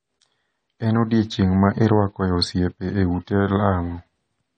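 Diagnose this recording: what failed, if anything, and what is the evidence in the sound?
The codec stage failed, and the sound is most consistent with AAC compression, likely at a low bitrate around 32 kbps. Throughout the speech, nothing survives above 9 kHz, so it sounds dull, and the damage is plainly audible: the encoder starved its frequency lines of bits, smearing and thinning the spectrum.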